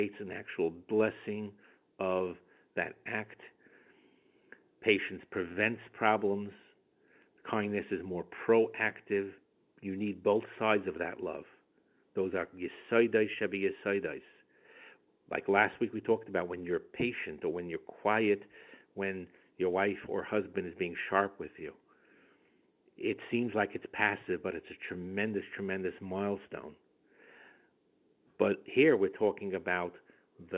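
Nothing is technically wrong with this speech recording, which comes through ordinary mu-law telephone coding at 8 kHz.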